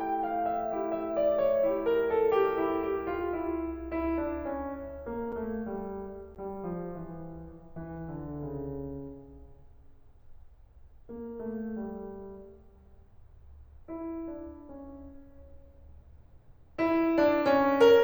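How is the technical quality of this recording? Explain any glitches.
The music has two brief dropouts, both blocks of digital silence. At 5.32 s and 6.35 s the playback buffer apparently wasn't filled in time, so the output was zeroed for about 5.8 ms and 11.6 ms, which fits 256- and 512-sample buffers. Each cut to silence has no fade, so the first sounds like a sharp tick and the second like a slightly longer pop.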